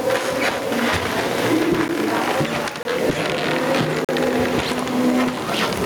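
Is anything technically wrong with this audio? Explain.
Yes, two faults.

Gain pumping runs through the whole clip. The level swings by something like 10 dB, so loud and quiet moments sit squashed close together. The likely cause is input gain set far too high for the microphone, with a fast limiter or compressor clamping down on each peak and releasing in the pauses.

Blocks of digital silence cut in three times, each a hard drop to silence and back. At 1.88 s there is a brief tick of about 11 ms. From 2.83 to 2.85 s a longer 21 ms dropout sounds more like a pop. From 4.05 to 4.09 s a 43 ms short hole. The lengths double each time, which fits whole buffers of 512, 1024 and 2048 samples being output empty when the program failed to fill them in time.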